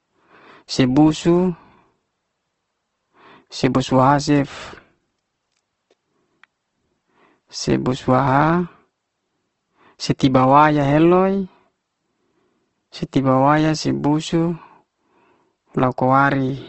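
Throughout the speech there is plainly audible damage consistent with Opus compression, likely from a low-rate encode in its CELT music mode, with a character that fits roughly 16 kbps. The band limit sits at a wideband setting, leaving nothing above 8.2 kHz, so the top end is dull. Starved bands have been refilled with folded or noise-like content rather than left empty, so the sound comes across as grainy and rough instead of swirling.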